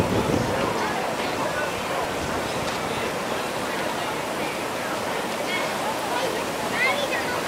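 From 1.37 to 2.39 s, chunks play out of order. One 341 ms chunk arrives two chunks late. The sound jumbles at the hard joins. From 3.76 to 5.12 s it recurs, three chunks late, with a longer garbled stretch.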